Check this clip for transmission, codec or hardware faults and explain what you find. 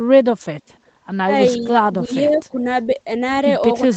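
Two faults stand out: brief echo leak at two points and speech suppressed in double talk overlapping the second. The audio is band-limited to 8 kHz throughout, which fits an Opus wideband call stream rather than a fault.

Echo leak appears at 1.48 to 1.52 s and again at 2.33 to 2.4 s. A faint delayed copy of the speech sits about 380 ms behind the original, at about 25 dB and 30 dB below the main speech respectively. The likely cause is a loudspeaker on the far end whose echo canceller left some residual pickup, which was then sent back. Both scraps are short.

Speech suppressed in double talk runs across 1.6 to 2.66 s, covering roughly half a second of affected audio within that span. The speech level dips in patches, with the deepest drops around 15 dB, and the sound thins and partly drops out while the other side is active. This likely comes from the echo canceller failing to tell local speech from loudspeaker echo, so it attenuated both together.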